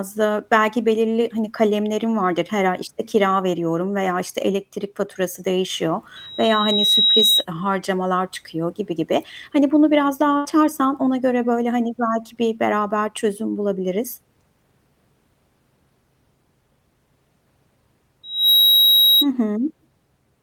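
At 6.16 s, right after "işte elektrik faturası değişiyor", a loudspeaker feedback squeal starts: the mic is catching its own speaker, and a 3.8 kHz tone swells over about 0.7 s to sit a few dB above the speech until 7.45 s, just before "harcamalar çıkıyor gibi gibi". The same 3.8 kHz howl returns from 18.23 to 19.27 s, building faster, in roughly 0.3 s.

In between, at 10.37 s after "bunu biraz daha", there's a burst of packet loss. For about 73 ms the receiver stretches the last sound and fades it down, then the audio jumps ahead to "ona göre böyle hani" with around 80 ms gone.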